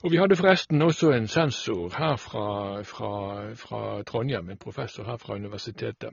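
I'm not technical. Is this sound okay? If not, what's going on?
No. The speech sounds dull all the way through. There is nothing above about 6.9 kHz, so the crisp top end is missing. This is a case of low-bitrate audio saved at a high bitrate. The recording was likely squeezed hard into a small file first, then saved again as a large, high-quality MP3. The bigger file cannot bring back the detail the first squeeze threw away.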